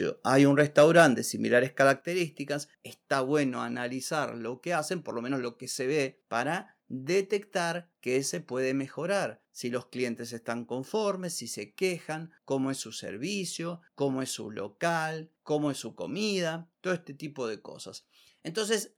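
It's a speech clip, and the trouble starts early. Right after "hay un", from about 0.59 to 1.07 s, you get microphone overload: the peaks run roughly 5 dB past what the converter can take, so their tops get flattened and that stretch picks up a harsh, crackly edge, with only a small fraction of samples actually hitting the ceiling. The likely cause is simply an input level set too hot for how loud the talker is at that moment. Then come two microphone volume step-downs. The first, at 1.0 s, still inside the distorted stretch and before "de similares", drops everything by about 3 dB. The second, at 2.01 s, just after "de similares", cuts about 6 dB more. Voice and background fall together in a single jump each time, with no gradual fade, which points to the call software likely reacting to the clipping by pulling the device's input gain down.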